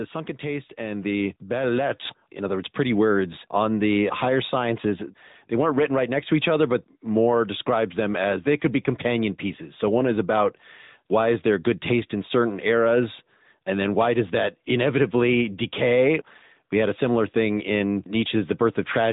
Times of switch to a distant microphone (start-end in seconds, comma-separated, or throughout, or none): none